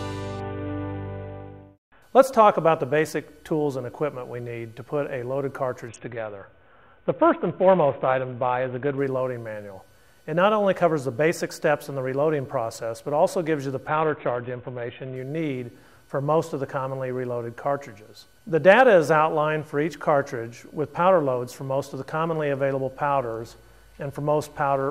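The audio has a Bluetooth SBC bit pool drop three times: 0.4 to 2.02 s, 5.88 to 8.98 s, and 13.88 to 15.16 s. In each, the treble dulls and gritty noise rises. The sound points to the bit pool falling from 28 to about 5, near 54 kbps, before recovering.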